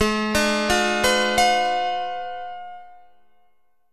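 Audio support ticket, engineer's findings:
Wrong sample rate, whole clip. Playback clock running slow relative to source, no resampling in path; slowdown fits 44.1 kHz material clocked out at 32 kHz. Result: audio at 0.726x speed, pitch down about 5.5 semitones, everything low, dragged and stretched throughout. Check output device rate negotiation.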